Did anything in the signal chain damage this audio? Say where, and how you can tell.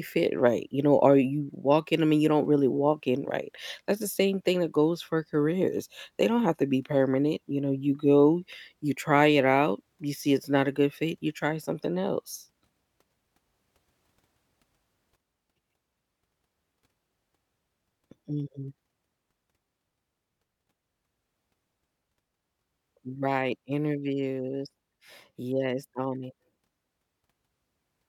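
Yes. At 15.16 s the speech drops abruptly by about 6 dB and stays down: one channel drops out, likely in analogue wiring, halving the mono sum. A fade would ramp instead.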